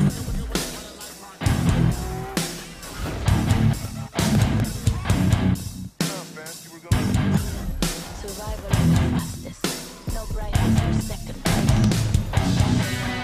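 Periodic USB or driver dropouts run from 0.1 to 13.1 s: every 0.25 s a background task stalls the audio path, dropping roughly a millisecond to silence, heard as steady ticks during signal.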